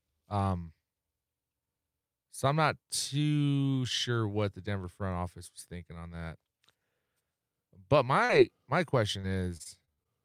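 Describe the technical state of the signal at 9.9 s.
At 9.9 s the signal sits inside a run of repeated packet loss from 9.21 to 10.07 s: six gaps, the longest 45 ms, each patched by extending the preceding sound. That concealment makes the speech choppy and robotic, with short fragments missing.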